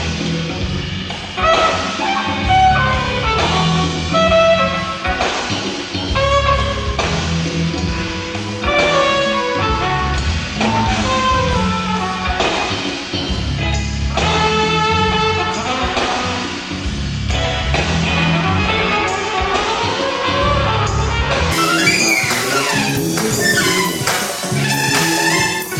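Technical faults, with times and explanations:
21.52–25.79 s: section at the wrong speed. The final stretch runs at twice its recorded speed, so events pass in half the time and pitch rises by roughly ten semitones, likely from playback against the wrong clock. On a spectrogram, harmonics jump upward and spread apart. The waveform looks squeezed in time.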